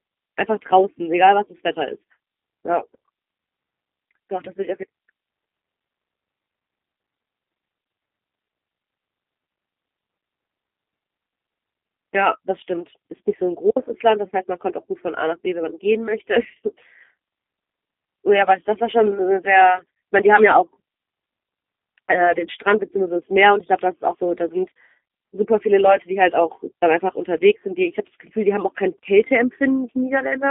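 From start to finish the speech has that G.729 codec sound: squeezed into a line band of roughly 250 Hz to 3.6 kHz, rebuilt from a filter, a pitch predictor and a few pulses, so it comes out clearly rough and a bit synthetic, which fits an 8 kbit/s VoIP link.

Around 25.08 to 25.10 s there's VoIP packet loss concealed by the speech codec. About 20 ms goes missing, which points to a single lost packet, and the decoder patches it by stretching the previous pitch and filter into a brief buzzy or noisy smear that fades before the sound recovers.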